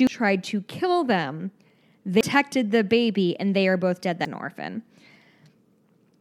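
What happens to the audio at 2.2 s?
At 2.21 s the compressed stream carries damaged data: a stretch of bytes in the encoded file is wrong, so the decoder misreads the frame there, loses its sync and has to hunt for the next valid frame header before it can carry on. In the speech this comes out as a brief, harsh chirp or blip, a momentary burst of garbled sound placed just before "the baby and they".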